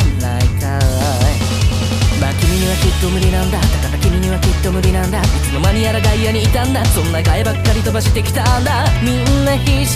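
The signal holds steady throughout, with no dropouts, level jumps or other technical faults anywhere in the audio.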